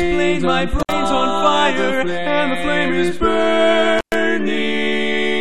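Around 0.80 to 0.92 s, and again at 3.98 to 4.15 s, there's an intermittent contact: a loose plug briefly opening, so the sound drops out with crackle at each edge and faint hiss underneath, for roughly 61 ms the first time and 113 ms the second.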